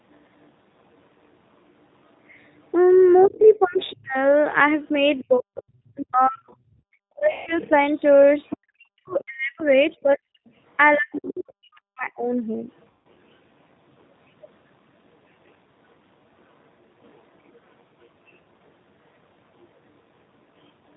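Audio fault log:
Throughout: G.729 codec. The speech is plainly rough and slightly synthetic, built from a vocal-tract filter, a pitch predictor and a few pulses per frame instead of the true waveform. This points to an 8 kbit/s G.729A stream. On a spectrogram, energy stops sharply at 4 kHz, with nothing above. The harmonics look smeared and grainy rather than cleanly striated, and noisy consonants appear as blotchy, uneven patches.
2.46 to 11.19 s: other side's voice leaking through. A second, fainter voice runs underneath the talker, roughly 25 dB below the main speech. The likely cause is the far end's audio playing from a loudspeaker and reaching the microphone without being fully cancelled. On a spectrogram, weak harmonic traces appear in gaps between the talker's syllables and do not line up with the main voice's pitch. The waveform shows low-level activity where silence should be.
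3.25 to 12.27 s: speech suppressed in double talk. The talker's voice repeatedly dips, thins out and cuts away in pieces, adding up to around five seconds. At its deepest it drops by roughly 40 dB, close to vanishing. This happens while the leaking far-end voice is present, likely because the canceller treats both voices as echo and attenuates them together. The waveform shows abrupt envelope notches mid-phrase. The spectrogram shows high frequencies fading and whole syllables going dark.
7.32 to 7.52 s and 12.90 to 13.07 s: VoIP packet loss concealed by the speech codec. Each event replaces about 150 ms of audio, which fits roughly five lost packets. In their place, the decoder stretches its last pitch and filter into a buzzy tone or coloured noise that fades. The voice stays weak and distorted briefly afterwards while the codec state recovers. A spectrogram shows flat, unchanging bands that dim steadily. 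The waveform shows a repetitive stretch with a decaying envelope.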